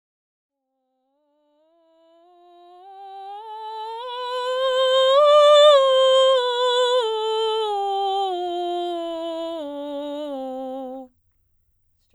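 Music, no technical faults found, with a smooth fade-in from the top that reaches full level by about 4.8 s.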